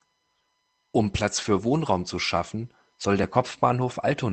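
A lost packet rebuilt from error correction occurs at 3.39 to 3.41 s, just after "zu schaffen soll der". The 20 ms stretch fits a single lost packet. The decoder filled it with the low-bitrate copy carried in the next packet, so nothing drops out, but that brief stretch sounds rougher and noisier. The Opus call path is audible throughout as coding noise, with the top end cut off around 8 kHz.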